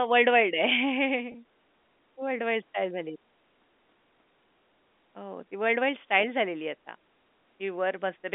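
At 1.32 to 1.34 s, packet loss with pitch repetition: about 20 ms of speech went missing, which fits a single lost packet, and the receiver filled it by repeating the last pitch period. Unlike a dropout, there is no silent gap or click, only a briefly held, slightly buzzy tone over the narrow telephone band of the G.711 line.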